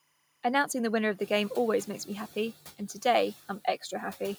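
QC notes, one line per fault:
1.19–1.55 s, noise suppressor catching up: the room noise steps up by about 10 dB at around one second, and the suppressor's noise estimate lags behind, so the noise first passes with too little reduction, then sinks by about 7 dB over 360 ms as the estimate adapts. Unlike a genuine change in the room, the noise surges and then recedes to settle about 22 dB below the speech, rather than simply staying louder.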